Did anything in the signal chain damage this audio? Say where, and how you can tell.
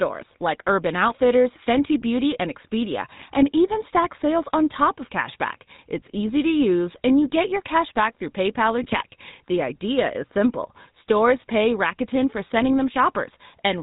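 Yes. The codec stage shows the damage of a GSM full-rate codec throughout the 14-second speech clip. The speech has a plainly audible buzzy, gravelly roughness, and nothing survives above 4 kHz. The codec rebuilds the voice from a vocal-tract filter excited by sparse, regularly spaced pulses, which fits a 13 kbps full-rate coder. On a spectrogram the energy stops at a hard 4 kHz ceiling, and the harmonics look coarse and smeared rather than clean.

GSM bit errors break into the decoded speech from 8.82 to 9.05 s. Over that quarter-second the voice collapses into squawks, pops and gargling. Corrupted filter, pitch and gain parameters reach the decoder, so each affected frame is rebuilt with a bent spectrum or a wrong level. The run of damage points to roughly a dozen consecutive frames. The waveform shows abrupt level jumps there, and the spectrogram shows blocky, frame-length smears that do not follow the surrounding speech.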